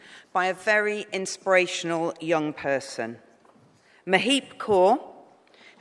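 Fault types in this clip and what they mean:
No technical faults can be heard anywhere in this clip. Nothing in the audio calls for a fault entry of any kind.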